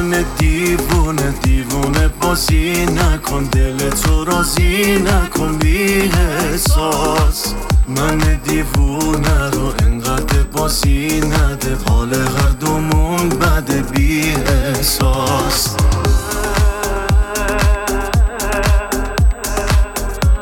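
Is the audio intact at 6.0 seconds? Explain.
No. At 6.0 seconds, as through the whole clip, a steady USB whine sits under the audio: a fixed tone at 8 kHz, roughly 30 dB below the signal. The bus draws current in 125-microsecond microframes, and that 8 kHz rhythm leaks into the audio through the power or ground. Mains hum sits at 50 or 60 Hz and its harmonics. This whine is a single high, unwavering pitch locked to the bus timing.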